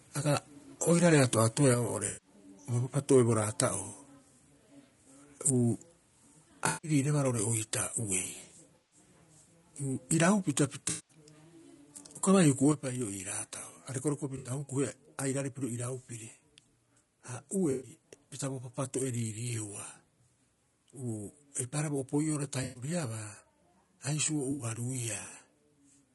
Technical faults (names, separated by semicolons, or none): low-delay AAC compression; microphone overload; microphone volume stepped down; AAC frame loss with concealment